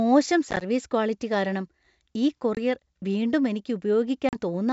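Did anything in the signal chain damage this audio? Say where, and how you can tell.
Yes. This is packet loss on an ADPCM call, at the network stage. There are hard-edged gaps at 0.51–0.64 s, where 40 ms is lost in short runs just before "ക്വാളിറ്റി കാരണം", then 20 ms at 2.55–2.59 s and 40 ms at 4.29–4.36 s. After each gap the decoder's predictor and step size no longer match the sender's, so speech resumes slightly distorted.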